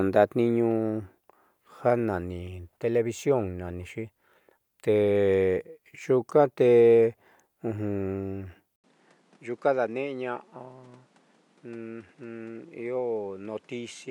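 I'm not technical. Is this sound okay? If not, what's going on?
No. At about 8.76 seconds the speech cuts out for a brief moment, under a tenth of a second, and then carries on through to the end sounding duller, a little quieter, and with faint new background noise. The crisp top end is gone, with nothing left above about 11.4 kHz. The likely cause is an input switched to a poorer device: the recording jumped partway through to a lesser microphone with its own character and noise.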